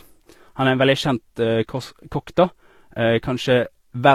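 A speech recording that was likely encoded twice with different lossy codecs, first with something resembling Vorbis at around 47 kbit/s and then HE-AAC at around 40 kbit/s. The second encoder spends its small budget reproducing the first one's errors while adding its own, so two kinds of artefact stack up across the whole clip. The top end stays limited by the lower of the two cut-offs, and the artefacts of one codec are heard together with the other's.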